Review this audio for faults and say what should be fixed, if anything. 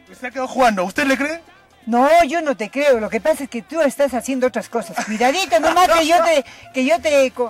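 Nothing needs fixing in this audio, because no technical fault can be heard anywhere in it. No repair or change to the signal chain is called for.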